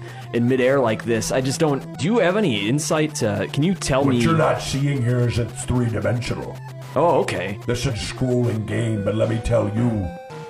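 At 1.95 to 2.01 s and again at 7.85 to 7.91 s there's damaged data in the compressed stream: bad bytes throw the decoder off sync, leaving a brief chirp, squawk, click or short hole while it hunts for the next frame.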